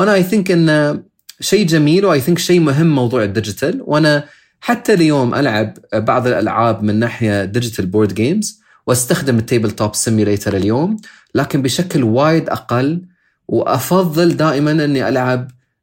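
No technical faults can be heard anywhere in the recording. The speech runs on without interruption and gives nothing to flag at any point.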